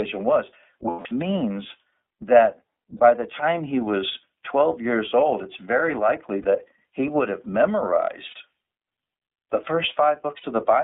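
This is a speech clip coded with the iLBC codec, and the codec damage is plainly audible. The band is squeezed to roughly 250 Hz to 3.7 kHz, so it sounds thin and phone-like, and the voice has that slightly rough, synthetic grain you get when each frame's excitation is coded on its own. The sound fits iLBC's 13.33 kbps mode with 30 ms frames. On top of that there are five spots of lost iLBC frames. The longest runs from 0.90 to 1.06 s, about 150 ms. Shorter ones, 30 to 60 ms each, fall at 2.97 to 3.00 s, 6.42 to 6.45 s (between "old it's very likely" and "he would have"), 8.28 to 8.34 s, and 10.37 to 10.45 s. In each gap the decoder fills in by repeating the last pitch cycle mixed with noise, so you hear a brief held, buzzy vowel. Because iLBC frames don't depend on the previous one, the speech snaps back cleanly right after each gap.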